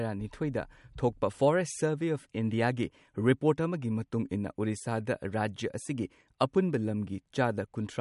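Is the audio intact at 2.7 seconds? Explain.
No, at 2.7 s and throughout the whole clip the speech is marred by what's likely MP3 compression. Nothing comes through above 11.2 kHz, and weak detail flickers in and out between frames, giving a watery swirl and smeared consonants that point to a bitrate around 51 kbps.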